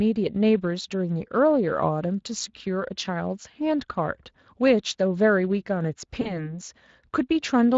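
Speex codec damage runs throughout this speech clip: the hoarse, noisy grain of a CELP coder short of excitation bits is plainly audible, and the coarseness fits a Speex bitrate of roughly 20 kbps. VoIP packet loss concealed by the speech codec appears from 6.21 to 6.50 s. About 40 ms of audio, consistent with two lost frames, is bridged by extrapolating the last pitch and filter into a stretched, fading sound, and the sound stays weakened until the decoder recovers.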